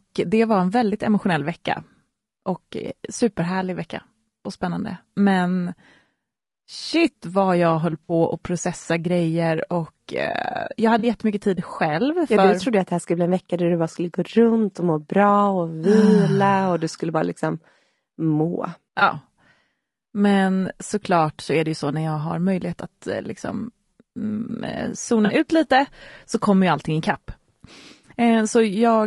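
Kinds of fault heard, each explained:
Low-delay AAC compression: the speech sounds rough and grainy throughout, with noise between harmonics, likely from a low-delay AAC codec at a bitrate around 32 kbps.
AAC frame loss with concealment: short smeared, noisy patches where the decoder filled gaps, at 8.04 s (60 ms), 10.99 s (40 ms), 18.99 s (20 ms) and 25.25 s (40 ms).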